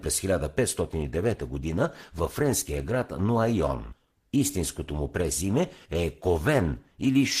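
From 0.82 s to the end, an adaptive stream at a lower bitrate took over. The connection slowed and the player switched to a version that sounds like Opus at about 16 kbit/s instead of 64 kbit/s. The speech's quality abruptly drops as codec artefacts rise, with no gap at the switch.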